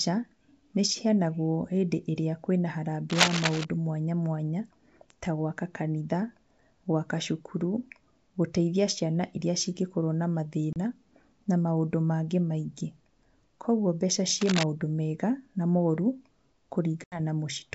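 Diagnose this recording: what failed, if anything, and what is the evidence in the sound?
Dense, uneven rustling scratches sit over the speech from 3.10 to 3.65 s, just before "mwanya mwanya", at about the level of the speech. A shorter, slightly quieter burst runs from 14.41 to 14.64 s, between "kwoguo mbeca" and "mega na". This is cable scratch noise in the analogue wiring, likely from a worn cable or connector being moved so its contact resistance jumps erratically.

Two hard-edged silent holes appear: a 30 ms gap at 10.73 s, right after "iria cingĩkorwo na", and an 80 ms gap at 17.04 s. After each the speech returns slightly distorted and settles within tens of milliseconds. This is packet loss on an ADPCM call. The first gap fits a few dropped packets and the second fits several. The G.722 decoder's predictor and step size lost track of the sender's.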